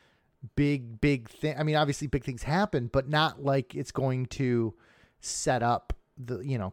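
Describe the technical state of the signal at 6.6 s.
At 6.6 s the signal is intact, with no dropout, clipping, distortion or other fault audible at that moment.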